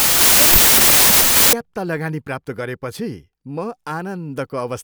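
From the start to 1.53 s the speech is swamped by loud, harsh noise, with the voice buried inside running about 1.33 times too fast and high. This is a wrong sample width: packed 24-bit samples read as 32-bit, mismatching bytes.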